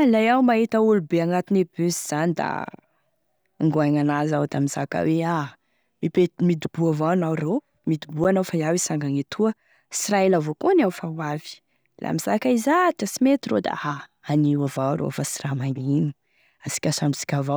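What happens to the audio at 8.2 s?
At 8.24 s the speech drops into a block of digital silence about 8.7 ms long. The sound cuts out and back with no fade, and a gap this short is heard as a tick or dip rather than as silence.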